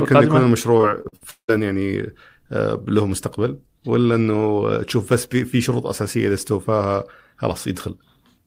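Repeated packet loss hits this speech recording between 0.77 and 1.50 s: packets go missing or arrive too late, one hole after another, with the longest lasting 175 ms. The receiver conceals each gap by stretching the last received sound, and that patching covers nearly half of the stretch. Concealed fill and outright dropouts each account for about a third of a second, so the speech turns choppy and robotic, with fragments audibly missing.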